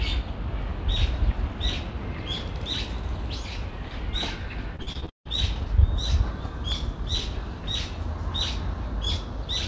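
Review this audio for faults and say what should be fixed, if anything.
From 4.76 to 5.27 s, repeated packet loss makes the sound choppy and robotic. Six gaps, the longest 159 ms, are patched by extending the previous sound, concealing over half the stretch. Spectrograms show smeared, repeated frames; waveforms show looped cycles. Forward error correction with a deeper jitter buffer would prevent it.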